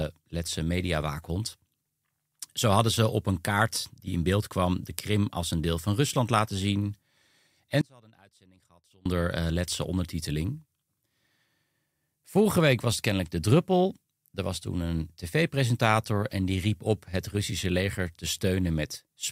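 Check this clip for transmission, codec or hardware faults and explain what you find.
The clip has one fault, an audio dropout to a faint residue, from 7.81 to 9.06 s. The signal feed was likely interrupted while the downstream path stayed live, so the speech abruptly collapses for about 1.2 s to a faint leak roughly 30 dB down, then snaps back.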